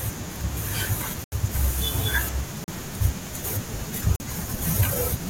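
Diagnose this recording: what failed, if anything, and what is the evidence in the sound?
Blocks of digital silence cut into the speech at 1.24 to 1.32 s (80 ms), 2.64 to 2.68 s (40 ms) and 4.16 to 4.20 s (40 ms). This points to the driver or buffer stage, where output blocks went unfilled in time and were left as zeros. The signal drops straight to silence and returns with no fade. Network loss concealment would instead fill the gap with smeared or repeated sound. The 80 ms gap being exactly twice 40 ms fits whole missed blocks.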